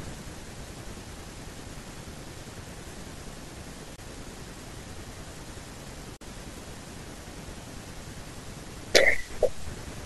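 Damaged compressed frames were rejected by the decoder and replaced with silence, a corrupt frame muted fault. At 3.96 s a 40 ms hole, and at 6.17 s a 56 ms hole, each fitting two lost frames, cut the speech off abruptly while timing holds.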